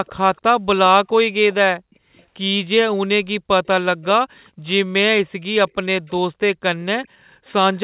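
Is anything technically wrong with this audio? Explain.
Yes, there is an echo leak. At 0.06–0.41, 1.91–2.23, 6.07–6.11, 7.04–7.08 and 7.47–7.8 s, a faint copy of the speech, roughly 30 to 40 dB down, trails it by a constant 409 ms. This is likely a far-end loudspeaker echo that the canceller missed. Unlike reverb, it is a separate repeat rather than a smooth tail.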